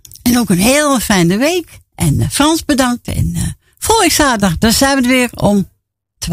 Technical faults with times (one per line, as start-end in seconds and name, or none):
none